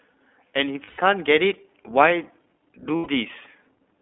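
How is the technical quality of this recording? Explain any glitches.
The quality is limited by plainly audible codec damage and two short dropouts.

Throughout, the speech carries the iLBC codec sound. It is band-limited to roughly 250 Hz to 3.5 kHz. Each 20 ms frame is coded on its own at a low rate, which fits 15.2 kbps. The result is a plainly rough, synthetic narrowband voice.

Lost iLBC frames occur from 0.84 to 0.99 s and from 2.96 to 3.10 s, lasting 140 ms and 100 ms. Packets went missing. The decoder filled each gap by repeating the last pitch cycle mixed with noise. This produces a held, buzzy vowel. The voice is right again almost immediately afterward.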